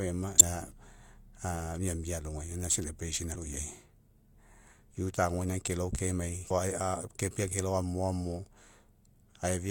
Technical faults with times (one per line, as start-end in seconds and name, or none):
0.36-0.41 damaged data in a compressed stream
3.31-3.36 damaged data in a compressed stream
6.46-6.51 damaged data in a compressed stream